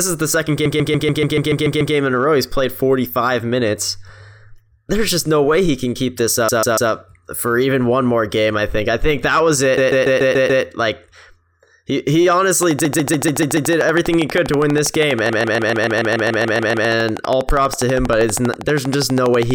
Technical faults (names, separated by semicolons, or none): repeated frames; train of clicks